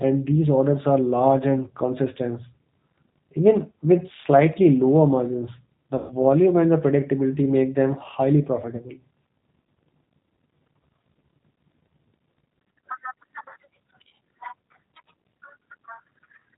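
Throughout, the G.729 codec's damage is plainly audible: rough, synthetic speech rebuilt from a vocal tract filter and pitch pulses, consistent with an 8 kbit/s G.729 stream, with the spectrogram empty above 4 kHz.

From 5.98 to 6.16 s, after "slightly lower margins the" and before "and the predictability make", VoIP packet loss concealed by the speech codec stretches about 120 ms of lost audio into a fading buzzy tone or coloured noise. On a spectrogram this looks like smeared, repeated spectra; on the waveform, a decaying envelope that recovers slowly.

At 8.76 to 8.86 s, after "predictability make them highly", a shorter 30 ms loss is concealed the same way, leaving a brief buzzy or noisy fill and a dip in level while the decoder recovers.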